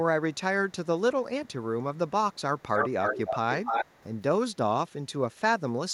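An echo leak, likely from a far-end echo canceller passing loudspeaker sound picked up by its microphone, sends the speech back delayed. Faint scraps arrive about 377 ms late at 0.33–0.37, 0.69–0.86, 1.45–1.53, 1.95–2.11 and 2.33–2.41 s. Copies as loud as the speech arrive about 286 ms late at 2.59–3.38 and 3.65–4.2 s.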